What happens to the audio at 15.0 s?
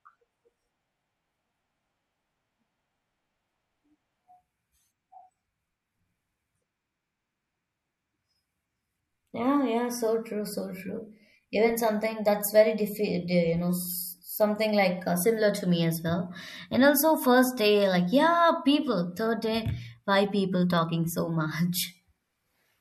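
Nothing goes wrong at 15.0 s: the speech carries on intact through that moment, with no dropout, click, distortion or other fault to be heard.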